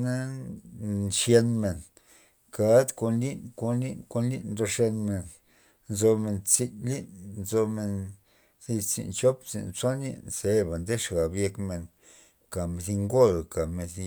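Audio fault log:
No faults were found in this speech recording.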